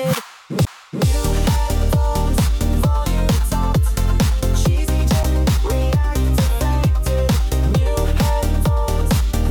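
The audio has two CD skips, at 0.65 s and 5.23 s. At each, the laser has jumped to another turn of the disc's spiral, likely from a knock or a surface flaw. The player mutes briefly, for roughly 15 ms at the first and only a few milliseconds at the second, then resumes from a different point. Unlike a plain dropout or click, the sound does not pick up where it left off.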